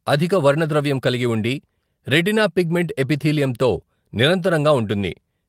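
No technical faults can be heard at any point in the speech.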